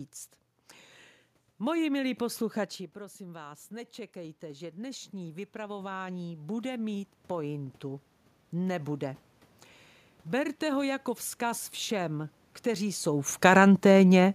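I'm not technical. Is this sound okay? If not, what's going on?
No. The level problem here is automatic gain rising. Around 2.5 seconds the talker moves away from the microphone, and the sound drops. From 2.17 seconds the recording system notices it is too quiet and slowly turns itself up. That takes until 9.31 seconds, so for about seven seconds the voice creeps louder. The room noise in the background swells up along with it, because the system raises everything together.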